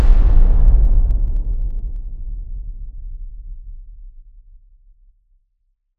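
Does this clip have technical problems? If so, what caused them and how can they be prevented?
Yes, there's zipper noise from 0.68 to 2.05 s. The level drops by roughly 15 dB there, but in 1 dB steps at about ten a second instead of a continuous ramp. Each jump puts a tiny click into the waveform, so you hear a fine ticking riding on the sound while the level falls. To prevent it, interpolate the gain per sample or add a short smoothing ramp.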